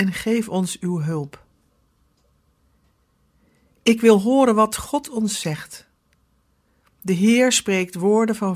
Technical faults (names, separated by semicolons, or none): none